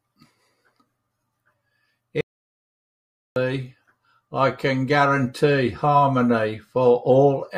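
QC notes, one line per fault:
2.21–3.36 s, audio dropout to silence: the speech cuts off mid-flow and returns after about 1.15 s. The gap is dead silence, with no room tone at all. The likely cause is a lost input while the recorder kept writing silence.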